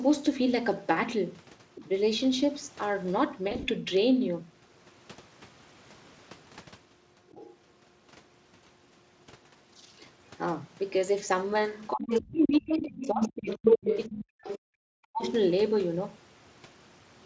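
At 1.75 to 1.89 s a faint second voice sits under the talker, about 20 dB down, and again at 7.28 to 7.57 s, about 25 dB down. This is the other side's voice leaking through, likely far-end audio from the loudspeaker that the echo canceller left in the microphone signal. Both are short scraps. On a spectrogram they show as weak harmonic stripes that don't line up with the main talker's pitch.

From 3.47 to 3.69 s the speech turns buzzy and fades in patches. This is VoIP packet loss concealed by the speech codec. About 120 ms of audio went missing in short gaps over 200 ms, which fits several 20 ms frames, none running longer than 40 ms. The decoder filled each gap by repeating its last pitch and filter at falling gain. A single gap at 6.15 to 6.18 s, fitting one frame, leaves a brief tonal smear. In the waveform these look like smooth, over-regular stretches whose envelope decays, and the spectrogram shows flat harmonic bands where the formant movement stops.

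From 11.76 to 13.98 s the leaked far-end voice reaches roughly the talker's own level, so two voices overlap clearly. Within that span, from 11.93 to 13.59 s, the talker is pushed down by speech suppressed in double talk, likely the echo canceller turning down everything while both sides spoke. Dips reach around 30 dB and cover most of that stretch. It happens again from 14.06 to 15.22 s with drops near 40 dB, and a short leak at 14.50 to 14.58 s, about 15 dB down, falls inside it. The waveform shows sudden holes in the envelope, and on the spectrogram the talker's upper harmonics thin out or vanish in chunks.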